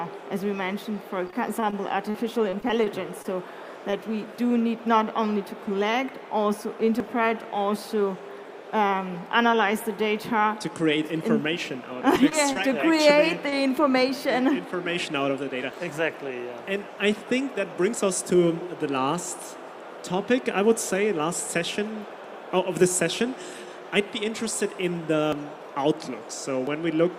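Packets arriving late or not at all over the network cause the first problem, repeated packet loss, heard as a robotic sound in two stretches of the audio. From 1.27 to 1.74 s, four gaps were patched by stretching the preceding sound, about 69 ms of fill in all, the longest hole 22 ms. From 2.10 to 3.26 s, seven gaps added 134 ms of fill, the longest 38 ms. Since each repair is followed closely by the next hole, the sound turns choppy, with slivers missing. Shorter single losses follow as short concealed packet loss at 3.90, 12.29, 12.53 and 13.49 s, each around 20 ms of missing data covered by continuing the last pitch or noisy texture and then blending back. Each one comes across as a brief smear or wobble, and a very short sound at that point can disappear. Separately, the capture side likely failed to collect samples before the hardware overwrote them, a dropped buffer (overrun). At 7.00 and 15.71 s roughly 50 ms of audio is lost, and at 12.16, 17.99, 25.33 and 26.67 s about 20 ms. 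No silence marks these spots. Instead the audio jumps forward where the two sides are spliced together.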